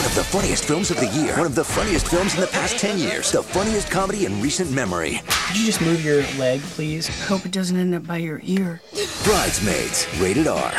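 Nothing stood out as a technical fault on listening to the clip.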